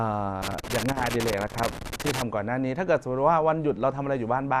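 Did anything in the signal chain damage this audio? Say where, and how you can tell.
Yes. Throughout the speech the sound is dull and gurgling, with a granular roughness and upper frequencies that seem to flicker in and out. That points to the codec stage, likely MP2 compression. MPEG Layer II splits the signal into 32 sub-bands and shares out bits among them. When bits run short, upper bands drop out intermittently and the rest are coarsely quantised. The level of damage fits a rate around 80 kbps.

From 0.42 to 2.22 s an irregular burst of crackling and scratching sits on top of the speech. That is loose connector crackle in the analogue wiring. A worn or dirty contact was rapidly making and breaking, chopping the signal on and off. Any DC on the line adds pops at the breaks. The burst stops at 2.22 s.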